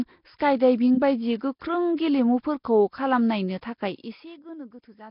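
Nellymoser compression runs through the whole speech clip, heavily damaged and likely the cause. The sound is rough and hissy with a smeared, underwater character, and nothing remains above 5.3 kHz. Coarse, fixed-precision coding of short blocks fits a rate around 22 kbps, with starved bands filled by noise.

Pre-echo appears at 0.38 to 0.40 s, spreading about 23 ms, then at 1.97 s (17 ms) and 3.61 s (14 ms). Quantisation noise sized for each sharp attack fills the quiet moment before it, so a brief hiss leads the onset and softens it.

Zipper noise runs from 3.82 to 4.4 s as the level drops by roughly 20 dB in steps, around a hundred per second. Each step is applied without smoothing and leaves a small click, heard as a ticking zip riding on the speech.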